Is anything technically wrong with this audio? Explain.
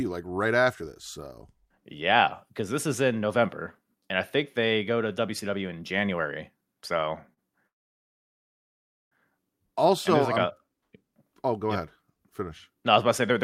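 Yes, there are two faults in this speech clip. At 7.33 to 7.40 s there is a short stall from a late packet. A packet missed its playout time and the jitter buffer ran dry, so the receiver stretched the last sound for about 38 ms before resuming where it left off. It is heard as a brief held sound with a slight buzz or dip, with nothing dropped.

From 7.67 to 9.14 s there is a call audio freeze. The speech halts and falls silent for about 1.44 s, then resumes from the same point with nothing lost. The likely cause is packets held up in transit, emptying the jitter buffer until they arrived, so everything after it plays roughly 1.4 s later.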